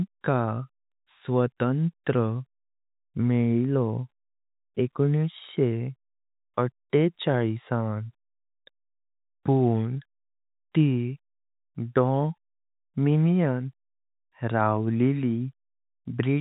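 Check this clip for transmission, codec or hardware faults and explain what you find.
No transmission, codec or hardware faults.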